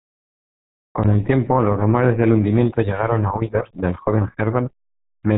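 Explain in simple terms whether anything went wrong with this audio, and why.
Something went wrong for the whole clip. The speech passed through the RealAudio 14.4 codec, an old format built for dial-up modems. It squeezes sound very hard. Nothing above 3.8 kHz survives, so the speech sounds muffled and gargly throughout.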